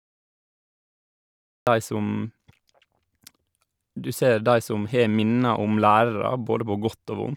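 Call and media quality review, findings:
Cut-off start: capture or stream began late, so 0.00 to 1.67 s is digital silence and the speech enters abruptly at 1.67 s mid-sound, with no natural onset or fade-in. Probable component: recorder or stream start-up.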